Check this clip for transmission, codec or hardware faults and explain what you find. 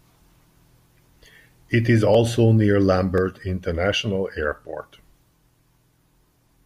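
Two faults are present, both of one kind. A block of digital silence occurs at 2.15 s and again at 3.18 s. Each hole lasts about 0.67 ms, which fits a 32-sample block left unfilled. The speech drops straight to silence and back with no fade. Each event is heard as a brief tick.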